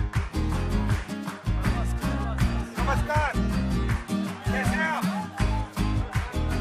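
At 3.60 to 3.62 s, an overlap between stream segments removes about 20 ms of sound where two segments' time stamps collide, so the waveform jumps and a brief click or skip results. Unlike a dropout, no silent gap remains; the surrounding audio simply closes up.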